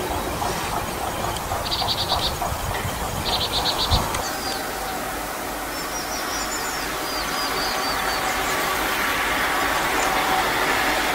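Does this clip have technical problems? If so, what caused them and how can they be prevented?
Yes. At 1.19 to 1.21 s there is a skip ahead: roughly 0.4 s of sound is missing, and playback jumps straight to later audio with no fill. The material was dropped either on the way or by the overflowing jitter buffer, cutting the delay by that amount in one step. On a waveform the envelope changes abruptly at the join. On a spectrogram a vertical seam appears where unrelated spectra meet, with no gap and no decay between them. Sizing the jitter buffer adequately and shedding excess delay gradually rather than discarding a whole block would prevent this.

From 1.33 to 4.69 s a jitter buffer speed-up follows. The receiver, still holding more audio than its target, removed many short pitch-period pieces, about 0.2 s in total, so the sound runs at 105% speed with unchanged pitch and feels slightly hurried. 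A spectrogram shows harmonics at their normal frequencies but with time features compressed. The waveform shows slightly shortened periodic stretches with small splice points. Adapting the buffer target smoothly and limiting the time-compression rate would keep the speed-up inaudible.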